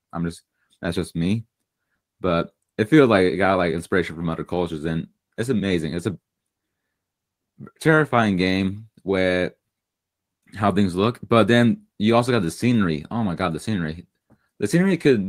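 A speech recording with clock drift between sender and receiver: the sending clock runs about 3% slow, so the receiver's jitter buffer keeps draining and small hiccups recur unevenly throughout. On a spectrogram, harmonic contours show brief kinks or duplicated slivers at irregular spacing instead of smooth glides. Repeated timing corrections run from 0.06 s to 15.26 s, with the receiver repeating short pieces to keep pace, so playback proceeds at 97% speed and gains roughly half a second overall. In the waveform, tiny seams and repeated cycles appear at uneven gaps, always lengthening, never shortening.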